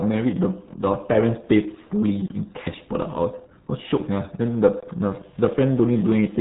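Throughout the speech, the RealAudio 14.4 codec leaves nothing above 3.9 kHz and a muffled, gargly texture, which fits an 8 kbit/s dial-up stream. Plain low-pass filtering would dull the sound but keep it smooth. This gargle comes from coarse, heavy coding.

From 5.20 s to the end at 6.40 s, a steady mains buzz appears, built on 50 Hz and sitting roughly 30 dB below the speech. Switching spikes twice per cycle spread harmonics upward, so it rasps rather than humming as a smooth, pure tone.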